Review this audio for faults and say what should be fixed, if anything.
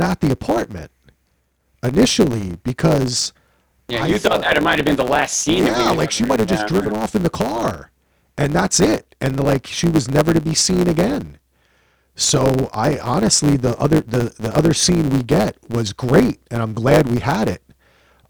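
A block size mismatch (truncated) runs through the whole speech clip. One stage hands over longer blocks than the next stage takes in, so the tail of every block is discarded. That produces a steady buzz at about 109 Hz, the block rate, and the speech plays about 1.09 times fast at close to its natural pitch. That unchanged pitch is what separates it from a sample-rate error, where speeding up would also raise the pitch. To fix and prevent it, make both stages agree on a single block size and check that every sample written is actually read.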